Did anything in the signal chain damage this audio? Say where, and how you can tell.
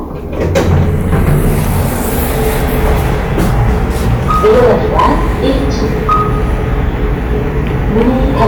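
Yes, there's hard clipping running through the whole clip. The loud moments carry a gritty, fizzy edge, which is what you get when peaks are sliced flat. It sounds like the level was driven about 9 dB past what a converter or the sample-format conversion could hold. Only a few percent of samples hit the ceiling, but those squared-off tops throw harmonics high up the spectrum, so the crackle shows up on every peak.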